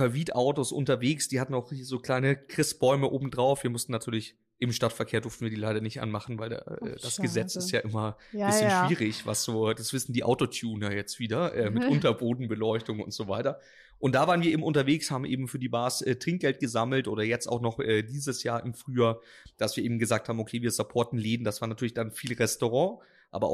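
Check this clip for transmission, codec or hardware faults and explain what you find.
No technical fault can be heard anywhere in the speech, and the signal stays continuous and steady throughout.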